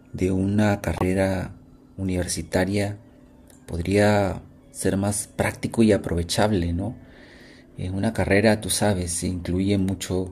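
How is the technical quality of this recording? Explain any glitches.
One glitch stands out in the speech, from 0.96 to 1.04 s: a corrupt frame decoded. Roughly three compressed frames with flipped bits were decoded anyway, putting energy at wrong frequencies. The result is a short chirp, squeak, blip or burst of noise, not the smeared repeat of a lost frame.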